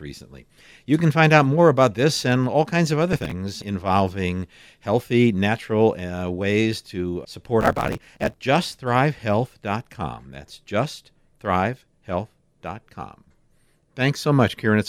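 Processor overload crackle at 3.13–3.31 s, between "all kinds of other" and "involving healthy natural", and again at 7.61–8.41 s after "ways to". Rows of very short buffers, which fits roughly 5 ms each, missed their deadlines and were skipped, leaving hard-edged gaps heard as gritty tearing across the speech.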